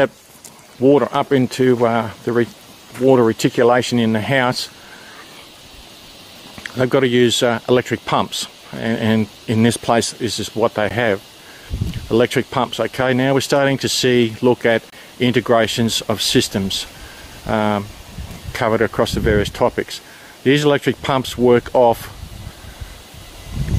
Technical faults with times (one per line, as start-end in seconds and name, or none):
10.89 gap between stream segments
14.90-14.93 gap between stream segments